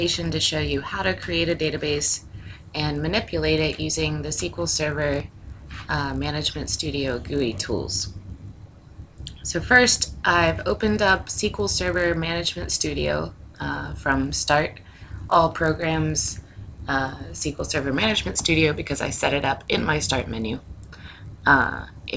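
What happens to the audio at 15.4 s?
At 15.4 s, as throughout the clip, the resampler restarted on every block: each 20 ms block was converted from 24 kHz to 16 kHz separately, leaving edge errors heard as a 50 Hz buzz wherever there is signal.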